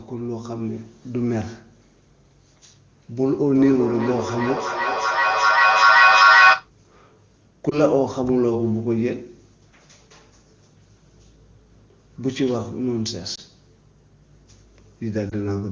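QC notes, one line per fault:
3.23–6.72 s, feedback echo between two devices: The sound comes back again and again at roughly 0.4 s intervals, each pass thinner and more ringing, and the repeats build up to about 8 dB above the speech. A second device in the room replays the call, and this microphone picks it up. The echo canceller only removes its own playback, so the loop keeps feeding itself.
7.70 s, 13.35 s, 15.29 s, lost AMR speech frames: Each spot has a brief dip or warble, and the voice then returns rough for a moment. A single 20 ms frame failed its checksum, so the AMR-WB decoder at 23.85 kbit/s reused the previous pitch and vocal tract settings at reduced gain.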